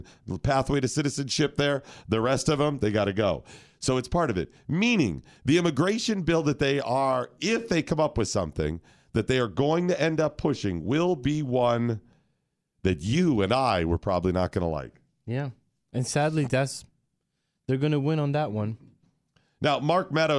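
Nothing in the speech stood out as a technical problem on listening.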